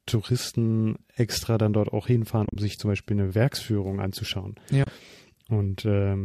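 AAC frame loss with muting breaks into this speech twice, from 2.46 to 2.56 s and from 4.84 to 4.87 s. Where frames went missing, the decoder zeroed their spectrum, and the overlapping windows fade the sound down and back up. Each gap is therefore a soft-edged hole. The first is several short dropouts scattered over 100 ms, the longest around 40 ms. The second is about 30 ms of lost audio. These sizes fit the short frames of a low-delay codec, likely AAC-ELD, whose light compression damage is also present.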